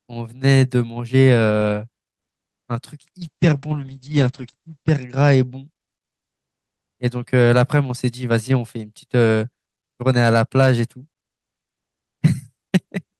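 A call bitrate drop runs from 3.23 to 5.71 s. The speech turns rough and watery, bottoming out for 1.66 s. The top end narrows from 20 kHz to 8 kHz, so it sounds muffled. This fits the encoder falling from about 48 kbps to 9 kbps.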